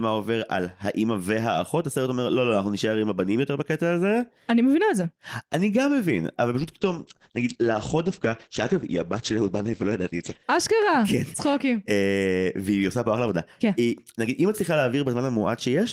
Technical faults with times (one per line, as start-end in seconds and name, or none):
6.60-10.53 call bitrate drop